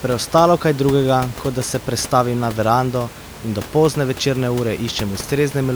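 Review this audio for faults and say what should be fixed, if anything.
Nothing here needs fixing: the speech signal comes through intact, with only the room's own background noise underneath it, sitting about 16 dB below the speech.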